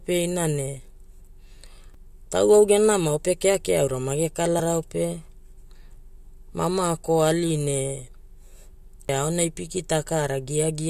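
A speech recording with two CD skips and one point where compressed frames were skipped. The CD skips fall at 1.94 s, just before "tauwau genamao pe keakea", and at 9.08 s. At each, the laser lost its track and landed on another turn of the disc's spiral, so playback mutes very briefly, for a few milliseconds at the first and roughly 10 ms at the second, and then resumes from a different spot. On the waveform this shows as a tiny flat gap ending in an abrupt step. On a spectrogram it is a thin full-height vertical line (the tick) where the speech pattern breaks off and restarts out of sequence. At 4.59 s, right after "pe keakea aura mage", roughly one frame of compressed audio was dropped by the decoder, either missing from the file or rejected as damaged. That cuts out about 20 ms, which fits a 21.3 ms frame. The audio simply jumps ahead by that amount. The waveform shows a discontinuity, not a gap.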